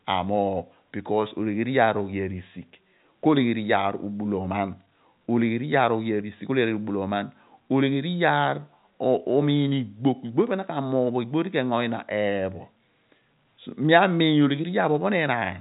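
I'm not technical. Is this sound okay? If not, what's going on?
Yes, this sound is okay, and nothing is going wrong with it.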